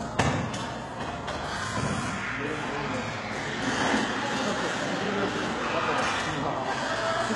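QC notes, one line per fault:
Throughout: low-bitrate audio saved at a high bitrate. Nothing exists above 11.4 kHz, and a spectrogram shows a hard flat ceiling there despite the MP3 file's generous size. This likely comes from a very low-bitrate first encode, fitting roughly 12 kbit/s HE-AAC, that later re-encoding cannot restore.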